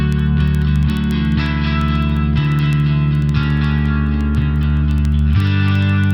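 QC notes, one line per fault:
0.12 to 6.11 s, word clock ticks: a steady train of ticks, roughly one every 70 ms, around a hundred in all. Two digital devices run on separate clocks, a few hundred ppm apart. At each slip, one sample is dropped or repeated, clicking audibly.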